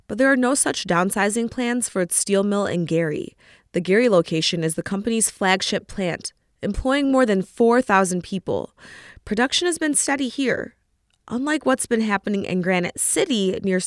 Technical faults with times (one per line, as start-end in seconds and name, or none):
none